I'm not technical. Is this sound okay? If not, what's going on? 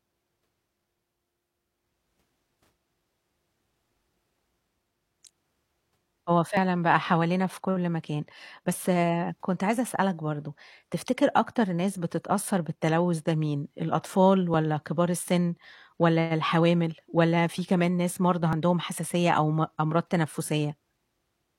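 No. An overlap between stream segments causes tiny skips at 4.54, 6.57, 14.54 and 18.53 seconds. The speech arrives in 2-second pieces whose timing overlaps slightly. The player trims about 30 to 40 milliseconds of real sound at each join, so it jumps.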